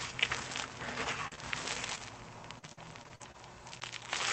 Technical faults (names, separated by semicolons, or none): short concealed packet loss; repeated packet loss (robotic sound); CD skip